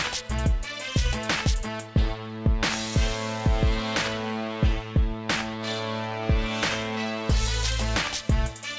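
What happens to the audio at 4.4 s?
Nothing goes wrong at 4.4 s: the audio is intact there, carried through a call path whose wideband codec leaves nothing above 8 kHz.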